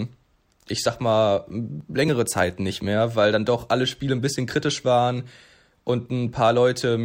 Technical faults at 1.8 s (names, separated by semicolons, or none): dropped buffer (overrun)